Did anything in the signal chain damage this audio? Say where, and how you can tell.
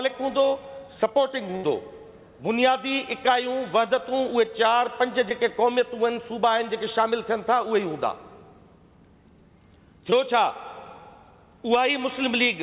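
Yes, and the damage happened on the network. From 1.56 to 1.65 s the sound stops moving forward. The last moment is stretched into a held, fading continuation, and then the audio picks up again with a piece missing. This is a burst of packet loss. A run of packets never arrived in time, and the receiver filled about 73 ms by extending and attenuating what it last had. When playback resumed, roughly 80 ms of the original had been skipped.

Two smaller glitches show up as brief smears or wobbles, from 5.29 to 5.32 s and from 10.10 to 10.14 s. Each is short concealed packet loss. A few hundredths of a second of audio missed the decoder, and the receiver bridged about 10 ms and 13 ms respectively by continuing the preceding sound, then blended back into the real signal. Both times about 20 ms of the original went missing. The audio also stops at 4 kHz, which points to a G.711 mu-law call path at 64 kbps.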